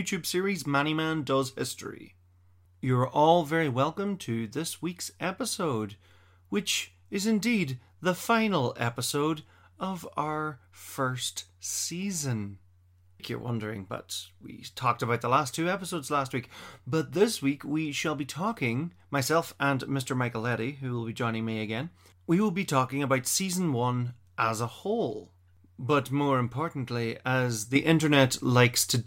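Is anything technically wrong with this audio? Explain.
Yes. At 27.76 s, after "more importantly as", a sudden gain jump of about 6 dB lifts speech and noise floor together, likely an unramped digital gain change.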